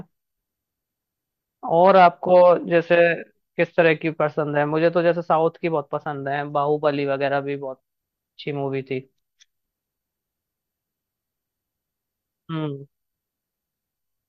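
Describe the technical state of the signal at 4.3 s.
No fault can be heard at 4.3 s, and the signal is intact at that point.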